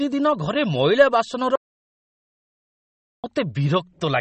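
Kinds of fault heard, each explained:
MP3 compression: An MP3 encoder with too few bits to spend, which fits a rate near 32 kbps, is the likely cause. It cuts all treble above 8.4 kHz and drops weak frequency lines, so the speech sounds dull, watery and swirly throughout, with plainly audible smearing.
Audio dropout to silence: The input feed was likely lost for a stretch while recording carried on writing zeros. From 1.56 s to 3.24 s the speech cuts out into complete silence with no room tone, and about 1.7 s of it is gone.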